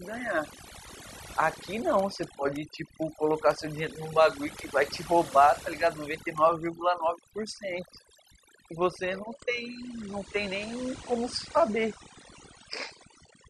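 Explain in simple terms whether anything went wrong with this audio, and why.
Throughout the clip the background drops and breaks up into twinkling specks. That is overdone noise removal: a cleanup tool set too strong shut off quiet sound along with the noise.

From 9.25 s to the end, the sound suddenly turns duller, with nothing left above about 9.8 kHz. This is an adaptive stream switching to a lower bitrate, likely because the connection slowed, so a lower-quality version played without any gap.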